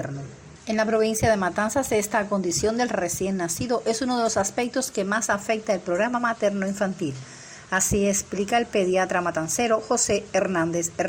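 No technical faults can be heard anywhere in the recording.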